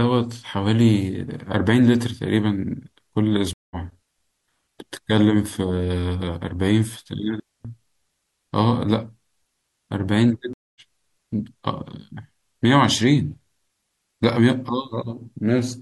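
At 3.53 s there is a stream reconnect. The connection breaks and the player restarts its decoder mid-stream, so after 174 ms of silence the speech resumes about 200 ms further on. At 4.03 s and again at 7.40 s there is a digital wireless dropout. The link loses too much data and the receiver mutes, leaving clean holes of 155 ms and 249 ms with no noise burst on either side. At 10.53 s a second stream reconnect leaves 222 ms of silence, and the speech picks up about 150 ms later.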